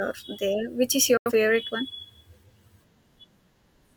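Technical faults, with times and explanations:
1.17–1.32 s, digital broadcast dropout: the receiver stopped getting usable frames, either losing the signal or rejecting frames that failed their checksum, and muted until valid data returned. The speech fades out over about 3 ms, almost a hard cut, then stays silent before resuming. Roughly 85 ms of programme never arrives, which fits two lost frames. The speech picks up with a gap rather than filling in what was missed.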